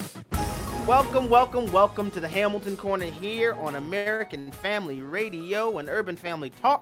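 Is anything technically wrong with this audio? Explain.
Yes, there are three short stalls from late packets bunched together: at 3.97–4.08 s, 4.16–4.21 s, and 4.39–4.49 s. Each time a packet missed its slot, the jitter buffer ran dry and the receiver stretched the last bit of sound, by about 84 ms, 36 ms, then 72 ms, before picking up exactly where it left off. Nothing's actually lost. You just hear the sound hang briefly with a faint buzzy smear, and the playback ends up lagging a little more after each one.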